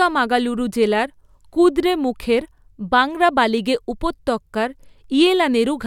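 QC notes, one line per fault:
No fault found in this speech clip.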